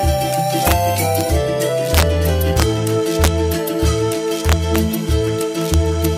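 Integer overflow shows up seven times: 0.67 to 0.72 s, a single crack at 1.21 s, then 1.94 to 2.03 s, 2.57 to 2.62 s, 3.24 to 3.28 s, 4.49 to 4.78 s and 5.74 to 6.05 s. The loud peaks overshoot the integer ceiling by only about 0 to 2 dB, but instead of being held at the limit they wrap to the opposite extreme. That gives harsh, violent cracks, far nastier than ordinary clipping.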